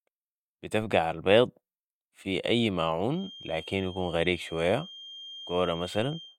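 At 0.82 s a DC step shifts the waveform's zero line by about -40 dBFS, heard as a low thump; the offset then drains away through a 5 Hz high-pass. From 3.06 s, after "في اي", a thin 3.2 kHz feedback whistle sits well below the speech to the end, likely from a loudspeaker-to-microphone loop, showing as a steady horizontal spectrogram line.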